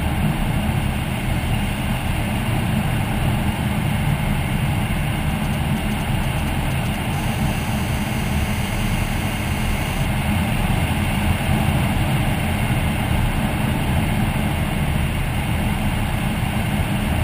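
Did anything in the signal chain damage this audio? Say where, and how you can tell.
Yes. GSM phone buzz entered the analogue wiring from 7.13 to 10.05 s: a steady 217 Hz raspy buzz with harmonics, about 19 dB below the signal, from rectified call bursts.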